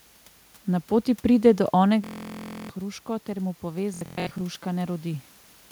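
Bluetooth stutter at 2.04–2.70 s: about 650 ms of packets never arrived, so a 15–25 ms slice repeats as a buzz, seen as evenly spaced vertical stripes. It recurs from 3.94 to 4.41 s, with about 325 ms lost in bursts up to 0.12 s long.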